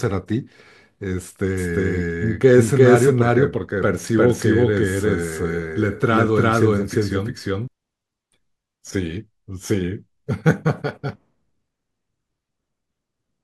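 From 1.58 s to 7.68 s the speech carries a doubled audio track: a second, equally loud full-band copy trails the original by around 400 ms, with no decay or room colour, starting and stopping abruptly. A slower second capture path is the likely cause.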